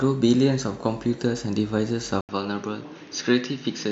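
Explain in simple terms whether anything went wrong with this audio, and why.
At 2.21 seconds the speech goes quiet for a brief 80 ms gap, then comes back duller and boxier, a little softer, and with faint new background noise that lasts to the end. Everything above 6.6 kHz, the crisp airy part of the sound, is gone. This is likely an input switched to a poorer device: the recording jumped to another microphone or a headset's call mode, which carries a narrower range of sound.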